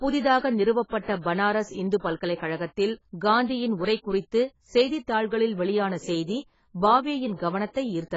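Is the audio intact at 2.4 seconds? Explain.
No. Pre-echo runs from 2.35 to 2.40 s. A short hiss precedes an attack by about 54 ms, because block-spread quantisation noise leaks ahead of it. The speech is also dull and smeared throughout, with nothing above 7.6 kHz. This is heavy AAC compression, likely at a very low bitrate near 16 kbps.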